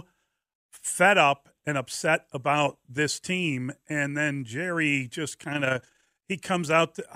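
From 5.52 to 6.33 s the speech carries overlap-add ripple: it was split into windowed frames and rejoined with an overlap whose gains fail to sum evenly, so the level swells and dips once per frame, around 30 times a second, by about 6 dB. It sounds like a rapid, rough flutter. On a waveform the envelope looks regularly scalloped. On a spectrogram, evenly spaced vertical light-dark bands run through that stretch.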